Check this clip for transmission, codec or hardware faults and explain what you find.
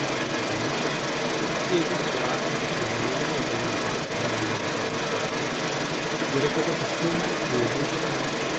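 Two faults stand out: a steady electrical whine under the whole clip, and a second voice that runs alongside the talker from start to finish.

USB whine runs the full length of the clip as a fixed tone at 1 kHz, sitting roughly ten decibels under the speech. The USB bus pulls current in 1 ms frames, and that thousand-per-second ripple gets into the audio through a shared power or ground connection. It doesn't move with the talker. It's just a thin, constant pitch underneath everything.

The other side's voice leaking through is also there from 0 to about 8.6 s. A second voice keeps coming through the whole time, and it's about 5 dB louder than the main talker. The likely cause is the talker's device playing the far end on a loudspeaker, with the echo canceller failing to strip that sound back out of the microphone feed. The result sounds like two people overlapping on one line. The top end of both voices stops around 8 kHz, which fits the Opus call path at that bandwidth.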